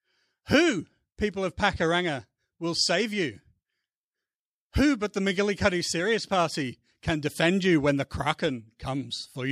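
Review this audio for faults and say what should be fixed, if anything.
Nothing here needs fixing; I couldn't hear any technical fault anywhere in the recording.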